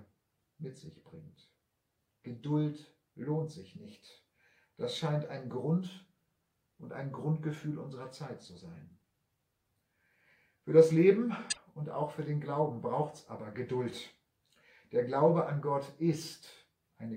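At about 11.48 s there's a short burst of damaged data in the compressed stream, lasting roughly a tenth of a second until 11.58 s. Some of the encoded bytes there got lost or overwritten, so the decoder couldn't make sense of those frames. It lost sync and had to hunt for the next valid frame header before picking up again. What you hear is a quick glitch, a chirp, squawk, click or short gap, cutting across the sound for that brief stretch.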